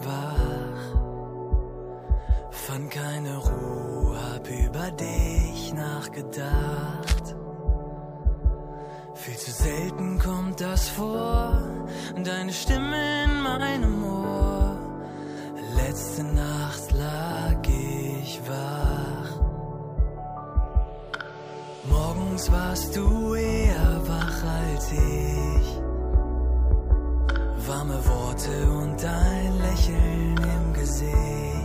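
At 3.12 to 3.15 s and again at 13.55 to 13.62 s there's a corrupt frame decoded: a damaged compressed frame got played anyway, spraying energy at the wrong frequencies as a short chirpy blip, the second one noticeably louder. Between them, 7.03 to 7.20 s brings a quick rustly scratch, likely cable scratch noise from a worn connector being moved.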